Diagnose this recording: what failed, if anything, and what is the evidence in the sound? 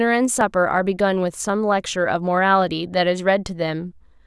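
Dropped buffer (overrun) at 0.41 s and again at 1.49 s, in the driver or buffer stage. Each point is a small forward jump in the speech with no gap of silence, where a few milliseconds of audio seem to be missing. The likely cause is the capture software failing to read its buffer before the hardware wrote over it, so the audio on either side of the lost block is joined directly.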